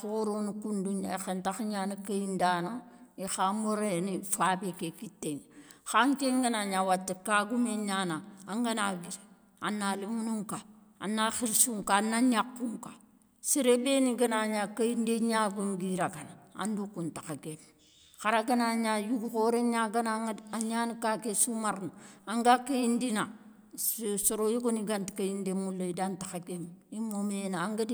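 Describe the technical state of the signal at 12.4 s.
At 12.4 s the speech signal is intact, with no dropout, distortion, glitch or other technical fault at that moment.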